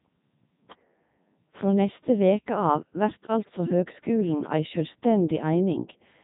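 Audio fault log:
Throughout: Codec 2 vocoder. The speech is resynthesised from sine waves driven by pitch, voicing and a spectral envelope, so it sounds heavily buzzy and robotic, with nothing above 3.8 kHz, fitting a 3.2 kbit/s mode. Unlike a bandwidth cut, the waveform itself is lost.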